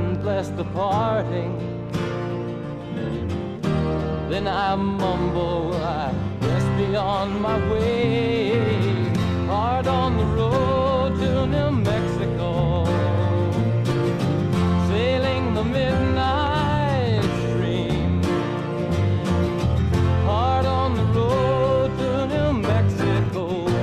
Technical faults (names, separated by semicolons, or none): none